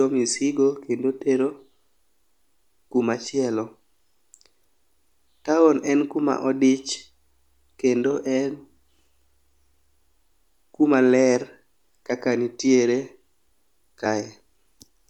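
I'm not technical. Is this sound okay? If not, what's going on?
No. At 2.99 s and 14.04 s, compressed frames are skipped: small chunks of the recording were lost, so the speech jumps ahead, about one frame (roughly 30 ms) and then about two. There's no silent gap; the speech simply jumps.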